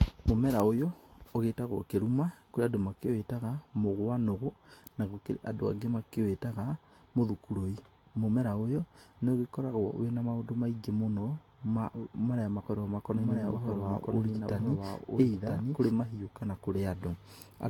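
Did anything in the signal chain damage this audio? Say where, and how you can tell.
Yes. Generation loss at the codec stage: throughout, the sound is swirly, hollow and smeared with blurred attacks, beyond what one encode near 65 kbit/s explains. That likely comes from about four Vorbis passes.

Doubled audio track, 13.12 to 15.90 s: a dry copy about 5 dB quieter trails by roughly a second and starts and stops abruptly, unlike a decaying echo. The likely cause is a second capture path.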